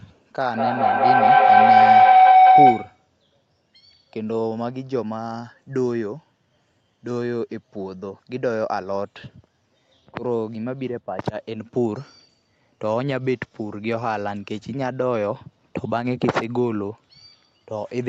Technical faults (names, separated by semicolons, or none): feedback howl; call bitrate drop